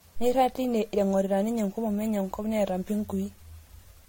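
Throughout, the speech shows generation loss: swirly, hollow smearing and blurred attacks beyond what one MP3 pass would cause, likely from about seven successive re-encodes.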